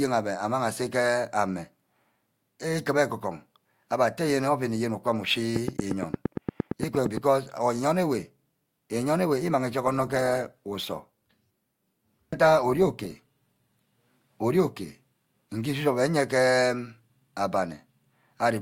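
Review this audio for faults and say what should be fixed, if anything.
Train of clicks, 5.56 to 7.18 s: a regular ticking at 8.68 clicks per second, about fifteen near-identical pulses standing roughly 15 dB above the speech and audible between syllables as well as over them. The even spacing and matching shape suggest something external injecting a pulse on a fixed cycle, likely electrical interference from nearby equipment or a faulty connection or power supply. Prevent it by moving or shielding the offending equipment and checking cabling and power.

Adaptive stream at a lower bitrate, 9.85 to 13.85 s: the speech abruptly loses clarity, with more obvious coding artefacts, then snaps back after four seconds with no gap at either edge. The sudden switch points to the player dropping from a version near 64 kbit/s to one near 24 kbit/s while the connection slowed, then recovering. Prevent it by buffering further ahead or setting a higher minimum bitrate for the stream.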